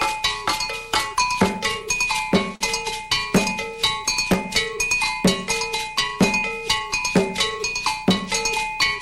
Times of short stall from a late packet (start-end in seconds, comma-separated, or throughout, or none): 2.55-2.62